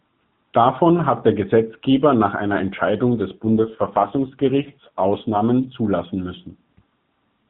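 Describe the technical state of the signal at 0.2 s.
At 0.2 s the signal is intact, carried as expected through the AMR narrowband mobile codec with nothing passing above 4 kHz and no fault at that moment.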